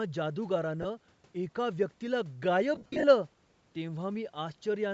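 Throughout, the speech carries a breathy, grainy edge in its upper range, likely from Bluetooth LC3 compression at a rate that fits about 48 kbps, which replaces discarded high spectrum with noise. From 0.82 to 0.85 s a brief noisy smear marks lost LE Audio frames, with the decoder repeating the last spectrum. From 2.75 to 3.04 s, scattered losses, the longest of them around 50 ms, blur the sound into noise.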